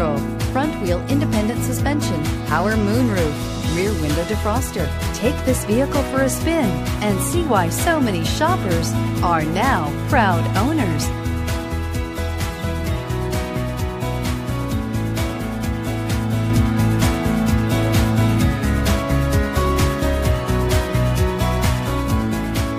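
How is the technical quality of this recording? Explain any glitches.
One glitch stands out: a sudden gain jump at 16.50 s, after which everything stays about 5 dB louder to the end. Sound and background noise rise together in one instant, with no ramp, likely from a digital gain change applied without smoothing. An automatic gain control would instead rise gradually and drift back.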